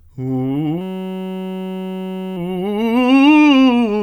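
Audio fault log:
0.81 to 2.37 s, system hang loop: the music freezes into a steady buzz pitched at about 188 Hz, because a single 5.33 ms slice of audio repeats exactly, nearly 300 times over. The playback side stalled while the sound hardware kept cycling through the same ring buffer, and a loop that short fits a 256-sample buffer. Each pass restarts the same waveform, so the repetition rate itself becomes the buzzing pitch rather than a stutter.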